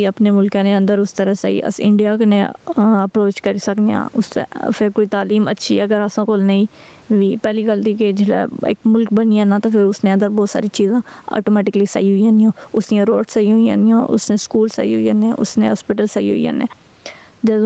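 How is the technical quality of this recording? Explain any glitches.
The recording has one clear problem: gain pumping, audible from start to finish. The level swings by around 10 dB, so the speech sounds squashed and compressed. The likely cause is microphone gain set far too high, with a fast limiter or compressor pulling the level down on every peak and releasing it in the gaps. The top end stops near 8 kHz, which is the bandwidth limit of the Opus call codec.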